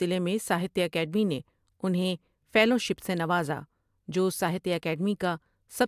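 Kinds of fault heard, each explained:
No audible technical faults in this speech recording.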